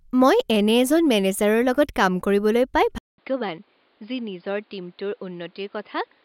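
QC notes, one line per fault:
2.98–6.25 s, input switched to a poorer device: after a 200 ms silence at 2.98 s, the speech turns dull and boxy and stays that way to the end. Nothing above 5.1 kHz remains, so sibilants dull and air vanishes, the level drops a little, and a different, faint background noise sits beneath the speech. The sudden change in bandwidth, level and noise character at one instant most likely reflects the recording switching to another, lower-quality microphone or a headset's call profile.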